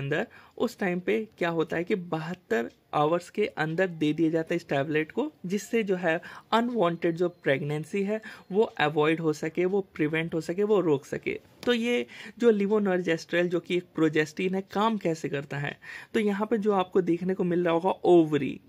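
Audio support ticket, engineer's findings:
Nothing stood out on listening; no symptom found to attribute to any component.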